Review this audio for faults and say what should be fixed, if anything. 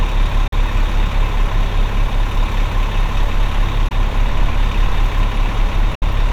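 Packets likely failed to reach the headphones over the Bluetooth link in time and were discarded, leaving the output silent until good ones arrived. The result is three Bluetooth dropouts, at 0.48 to 0.53 s, 3.88 to 3.91 s and 5.95 to 6.02 s. Each gap is a short hole of silence. The sound resumes further along, having skipped about 43, 21 and 64 ms, which fits two, one and three lost packets. Keeping the headphones close to the source and away from wireless interference should prevent this.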